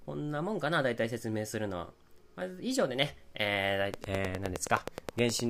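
A train of clicks runs from 3.94 to 5.41 s: around fifteen evenly spaced pulses at 9.6 per second, standing out about 20 dB above the sound, even in pauses. Such regular ticking is likely interference from nearby equipment or a faulty connection or power supply.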